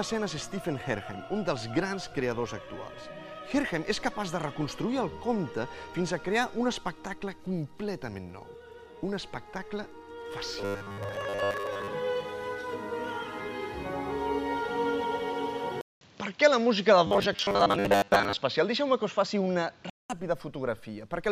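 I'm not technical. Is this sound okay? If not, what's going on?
No. From 10.59 to 11.93 s and again from 17.07 to 18.41 s there is robotic sound from repeated short buffers: a rigid, metallic 100 Hz buzz, likely from tiny snippets being replayed instead of fresh audio.

At 15.81 s, a 200 ms gap and then an abrupt change to a duller, slightly different-level, noisier sound, lasting until 20.10 s, point to an input switched to a poorer device, likely another microphone or headset. Unlike the buzz, the switch itself doesn't mangle the sound.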